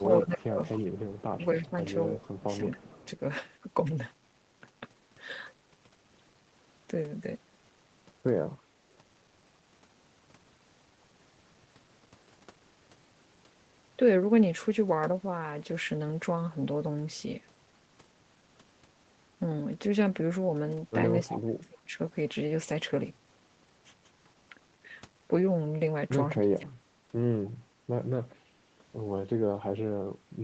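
Speech, carried over a call path that limits it to about 8 kHz. The speech dips and drops out at 0.07–0.59 s, 1.35–3.04 s, 21.27–21.98 s and 26.42–26.87 s, falling by up to about 30 dB. This is likely speech suppressed in double talk. With both sides talking at once, an echo canceller turned the whole signal down. A faint copy of the speech trails it by 273 ms, about 20 dB quieter, at 0.12–1.66 s, 2.71–2.82 s and 21.21–21.25 s. This is likely an echo leak. Sound from a loudspeaker reached a microphone, and its canceller let some of it back through.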